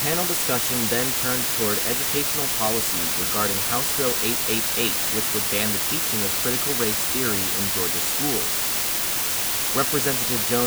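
From start to finish the speech carries low bit depth with dither. The samples have been rounded to just 3 bits, with random dither added beforehand, so the rounding error becomes a steady, even hiss instead of harsh distortion. That hiss sits nearly level with the speech. On a spectrogram it fills every frequency as a uniform grey wash, and the waveform shows a thick band of noise that never drops away between phrases.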